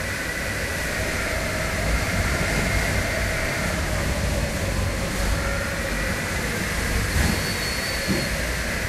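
DAB burbling at 2.25–2.68 s and 4.99–5.26 s: bit errors slipped past error correction into the MP2 data, putting short noise blips into single sub-bands.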